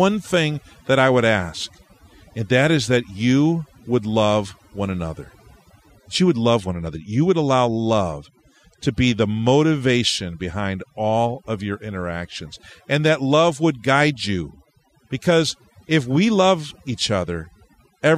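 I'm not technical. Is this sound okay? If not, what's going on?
No. A noise reduction tool was pushed too hard on this speech recording, which is called overdone noise removal. It works by shutting off any slice of the sound that looks like background hiss to it, but at this setting it also takes quiet parts of the voice along with the hiss. The result runs through the whole clip: the background breaks up into twinkling, warbling specks, and the voice can come across watery or thin.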